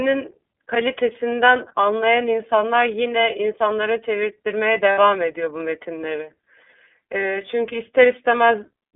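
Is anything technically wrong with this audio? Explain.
Yes, there are two problems. The whole clip of speech runs through the iLBC codec, a narrowband VoIP coder. The sound is confined to roughly 250 Hz to 3.5 kHz, with nothing above that, and the coding damage is plainly audible as a rough, slightly synthetic edge on the voice. That roughness comes from coding each frame's excitation independently at a low rate, which fits the 13.33 kbps, 30 ms frame mode. Plain band-limiting alone would make the voice muffled but smooth, not grainy.

At 4.92 to 4.99 s there are lost iLBC frames, about 60 ms in all, which fits two frames dropping out. The decoder covers the hole by repeating the last pitch cycle blended with noise, so instead of silence or a click you hear a brief held, faintly buzzy vowel. What separates this from generic packet-loss concealment in a codec that depends on previous frames is the recovery. 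Because each iLBC frame stands alone, the voice is clean again immediately after the gap, with no lingering smear.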